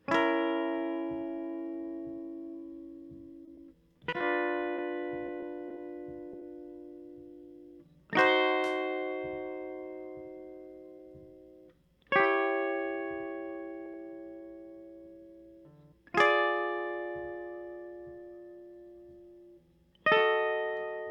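From 3.45 to 6.43 s, repeated packet loss leaves twelve short gaps, each patched by extending prior sound: choppy and robotic, unlike a single dropout.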